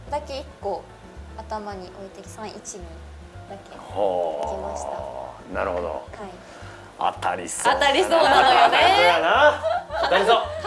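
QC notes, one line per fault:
No audible faults found anywhere in this clip.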